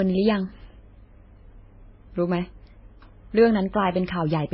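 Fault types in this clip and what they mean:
Transcoding between lossy codecs: The speech sounds like it likely passed through several lossy codecs in turn, MP3 then WMA then MP3 again. Nothing remains above 5.6 kHz, so the top end is dull. Smeared, watery artefacts from different stages pile up together.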